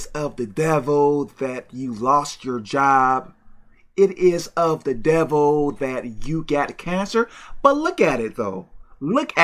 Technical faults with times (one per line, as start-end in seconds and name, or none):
none